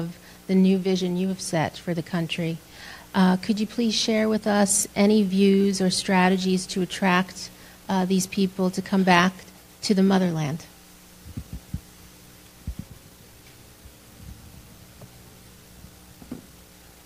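No technical faults can be heard in this clip.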